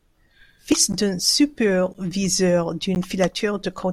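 At 0.72 s, damaged data in the compressed stream makes the decoder misread a frame and resync, leaving a brief blip in the speech. From 0.92 s, gaps between chunks leave 12 ms holes after each one-second chunk, repeating at 1.94 s and 2.95 s as short dropouts.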